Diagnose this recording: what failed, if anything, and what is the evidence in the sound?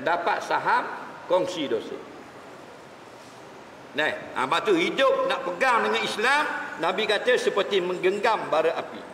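Nothing in the signal chain shows a failure: no dropouts, clicks, level steps, pitch shifts or bandwidth changes appear anywhere in the recording.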